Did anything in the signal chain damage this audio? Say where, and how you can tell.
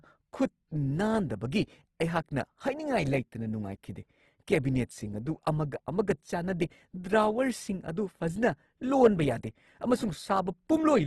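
Yes: Opus compression at the codec stage, throughout. The speech is grainy and rough with nothing above 12.2 kHz, likely a bitrate near 16 kbps noise-filling starved bands.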